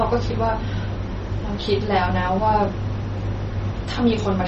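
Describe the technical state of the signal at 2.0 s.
MP3 compression, present throughout, is likely behind the watery, swirly speech at 2.0 s: nothing remains above 8 kHz, and the damage fits a 32 kbps bitrate. Clock slip clicks run from 0.13 s to 4.44 s. A single sample is dropped or repeated about every 50 ms, producing a soft, regular rattle that points to a clock mismatch of a few hundred ppm.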